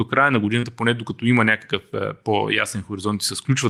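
At 0.59 s, running to about 0.66 s, the speech shows a short concealed packet loss. Roughly 40 ms of the stream did not arrive at the decoder in time, and the receiver covered the hole by extending the preceding sound for about 33 ms before crossfading back into real audio. The result is a brief smeared wobble in the speech rather than a clean gap.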